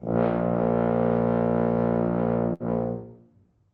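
At 2.53 s the sound briefly smears into a held, fading tail for about 65 ms, then jumps ahead at 2.63 s with roughly 60 ms of the sound simply gone. This is a burst of packet loss: consecutive packets arrived too late or not at all, so the receiver stretched and faded the last audio, then resumed past the gap. The call path's codec limits the top end to about 8 kHz, which points to Opus.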